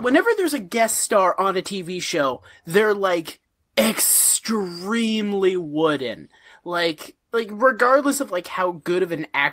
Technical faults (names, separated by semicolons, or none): lost packet rebuilt from error correction